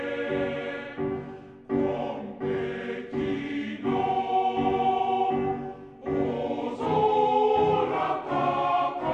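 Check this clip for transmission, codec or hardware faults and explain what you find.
One fault runs throughout: a wrong sample rate. The whole clip plays at 0.726 speed and about 5.55 semitones low, which fits 44.1 kHz material played at 32 kHz without conversion.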